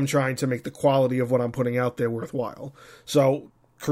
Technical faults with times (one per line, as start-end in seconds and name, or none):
none